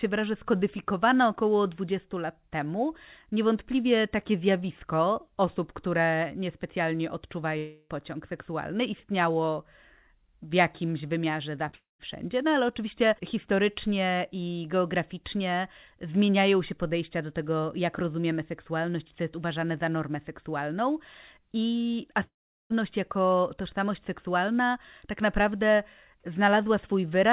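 Speech carried over a call link, band-limited with nothing above 4 kHz, which fits G.711 mu-law at 64 kbps, and broken up three times by gaps where the sound stalls. From 7.58 to 7.91 s the last sound is drawn out into a fading buzz for the whole third of a second and then the speech resumes further on. From 11.75 to 12.01 s a shorter smear gives way to about 0.15 s of near silence. The longest, 22.23 to 22.76 s, collapses into roughly 0.4 s of silence or low noise. These are each likely a long network dropout: packets stopped arriving, the receiver extended the final sound until it ran out, and the missing stretch of speech was simply skipped. Just before the second dropout, from 11.69 to 11.75 s, there is a brief wobble lasting about 40 ms, a short concealed packet loss in which a few hundredths of a second failed to reach the decoder and were patched by continuing the preceding sound before blending back in.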